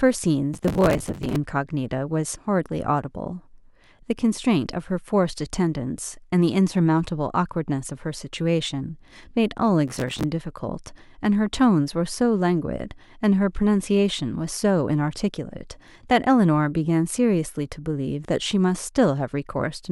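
From 0.54 to 1.36 s, processor overload crackle tears through the speech. Buffers of around 5 ms miss their deadlines in quick succession. Each gap is filled with repeated old audio, giving gritty crackle. It returns from 9.88 to 10.24 s.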